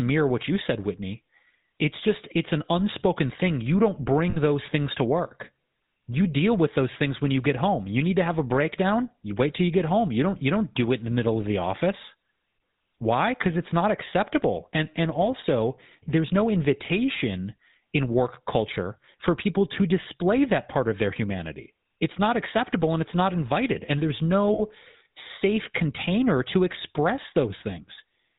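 Throughout the speech the GSM full-rate codec is plainly audible. The sound is rebuilt from a vocal-tract model excited by regularly spaced pulses, with only every third excitation sample kept, which fits the 13 kbit/s full-rate mode. Nothing above 4 kHz survives, so the band is dull and closed, and the voice carries a buzzy, gravelly roughness.

Lost GSM frames occur three times. From 4.30 to 4.37 s, just before "those things to work", about 40 ms is missing. The same happens from 24.54 to 24.60 s, just before "safe container to express". From 27.58 to 27.62 s, just after "safe container to express", about 20 ms is missing. The first two gaps point to two dropped frames each and the last to one. In each case the decoder repeated the last good frame's settings instead of leaving silence. The result is a brief rough, metallic ring held over the gap. All three gaps are too short to fade fully to silence.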